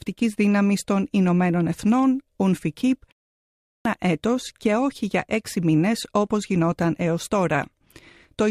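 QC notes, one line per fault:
3.46–3.85 s, clipped start after a pause: speech resumes abruptly out of a 0.42 s silence with roughly 390 ms of its opening missing, so the first sounds are swallowed. The output device dozed during the gap and needed that long to wake and lock before passing audio again.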